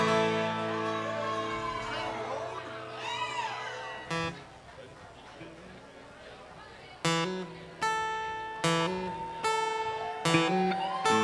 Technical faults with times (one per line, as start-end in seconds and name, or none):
none